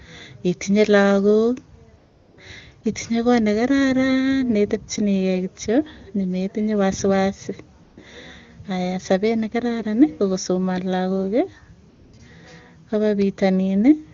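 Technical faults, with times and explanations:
1.97–2.37 s, 2.81 s before "itinye koot", 7.83–7.97 s after "kityo maneitinye wasiwasi", 11.89–12.13 s after "ko kosoman lagooki", and 12.17 s: AMR comfort noise. Speech frames stop for 400, 20, 140, 240 and 20 ms. The receiver fills each gap with smooth synthetic noise built from a rough level and spectrum. The real background drops out and returns, so the steady hiss switches in and out.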